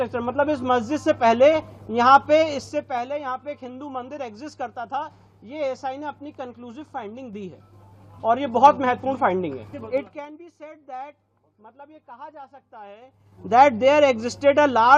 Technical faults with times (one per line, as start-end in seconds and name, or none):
1.56-1.90 DAB burbling
2.47-3.04 zipper noise
7.13-8.70 zipper noise
9.84-10.30 zipper noise
12.99-13.50 zipper noise